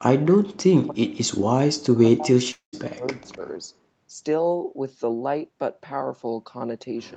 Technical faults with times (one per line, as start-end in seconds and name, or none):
0.36-3.42 speech suppressed in double talk
2.51-2.75 long network dropout